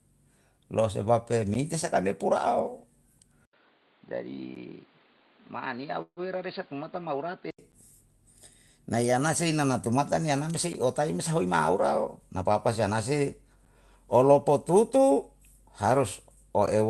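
Speech, with a gap between chunks at 1.54 s (between "lao sebeb" and "saka ne pura ao"), 4.55, 7.72, 10.73 and 16.66 s: the audio arrived in 3 s chunks, and each join leaves a hard-edged 12 ms hole of silence while no sound is lost. An input switched to a poorer device runs from 3.45 to 7.59 s, opening with an 80 ms silence; the sound turns dull with nothing above 4.8 kHz, drops about 10 dB in level and gains its own background noise about 30 dB below the speech, most likely a change to a different microphone or a headset call profile. A call audio freeze at 6.02 to 6.20 s stretches the last sound into a fading 147 ms fill ending in 60 ms of silence, likely because delayed packets emptied the jitter buffer. Speech then resumes exactly where it stopped, so nothing is missing but everything after sits 147 ms later. A jitter buffer speed-up at 11.31 to 11.76 s and again at 12.43 to 12.91 s plays the speech at 108% speed with unchanged pitch. 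The receiver trimmed around 40 ms and 50 ms in small pitch-period slices to shrink an overfull buffer, so those stretches sound hurried.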